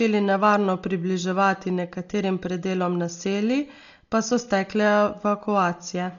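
Speech with Dolby Digital compression throughout: dull, nothing above 6.9 kHz, with rough fluttering dither noise around tones, unlike a clean low-pass. This is likely heavy AC-3 coding at a very low bitrate, around 40 kbps.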